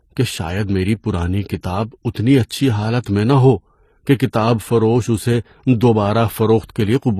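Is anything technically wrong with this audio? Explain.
Yes. Throughout, the speech carries stacked compression artefacts and nothing above 14.9 kHz, likely from transcoding between lossy codecs, fitting 44 kbit/s MP3 re-encoded as 24 kbit/s HE-AAC.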